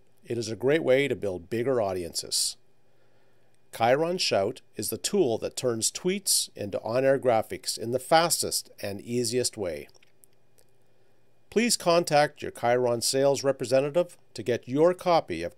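Nothing in the audio stood out as a technical fault on listening.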